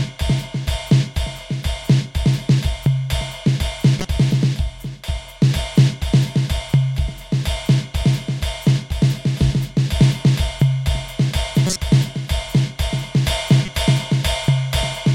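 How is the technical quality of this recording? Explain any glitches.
The music has three short glitches from corrupt frames decoded, at 3.99 to 4.05 s, 11.67 to 11.76 s and 13.63 to 13.68 s. In each, damaged compressed frames were played anyway. Misread gains and codes put energy at wrong frequencies for a few frames, heard as brief chirps or noise bursts.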